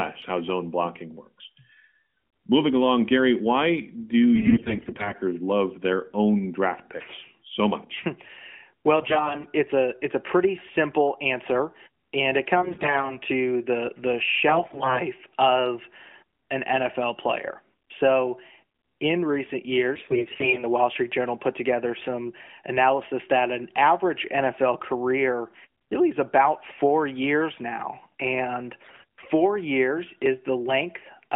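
AMR bit errors roughen the speech six times: 4.36 to 5.15 s, ending before "love their own draft"; 8.96 to 9.46 s; 12.56 to 13.17 s, between "simple answer and it" and "to the the"; 14.48 to 15.01 s; 19.96 to 20.65 s; and 28.84 to 29.31 s, after "years now and". Flipped bits scatter the codec's pulses and detail values, so pitch and level hold but the narrowband speech turns hoarse and gargly, worst around 20 s.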